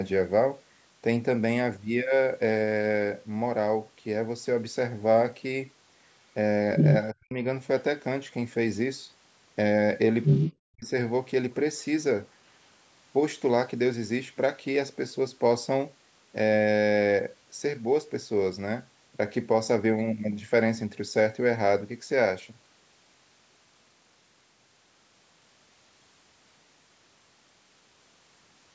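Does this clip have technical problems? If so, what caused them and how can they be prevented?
Yes. From 6.76 to 6.99 s and again from 10.23 to 10.54 s, a second, foreign voice briefly breaks in, slightly louder than the speech itself. This is the other side's voice leaking through. The likely cause is that the talker's loudspeaker played the far end into the microphone and the echo canceller left part of it in the signal. Using a headset, or lowering loudspeaker volume and improving echo cancellation, keeps the far end out of the microphone.

Right after each leak, from 7.13 to 7.37 s and from 10.6 to 10.92 s, the speech itself sinks sharply, nearly to silence, for roughly a fifth and then a third of a second. This is speech suppressed in double talk, which likely happened because both sides spoke at once and the canceller, unable to tell the local talker from the echo, attenuated everything. 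A headset, or an echo canceller with better double-talk detection, prevents these dropouts. The call's band limit at 8 kHz is normal microphone processing.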